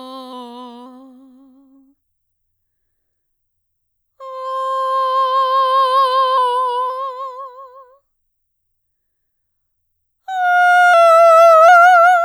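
The music drops in speed and pitch together three times, from 0.33 to 0.86 s, 6.38 to 6.90 s and 10.94 to 11.68 s. Each time it slows by 6.3% and sinks 112 cents, a little over a semitone, then snaps back. That pattern is likely a drift correction step, where clock-matching software briefly lowered the playback rate to rebalance its buffer. The detuning is most obvious on sustained tones.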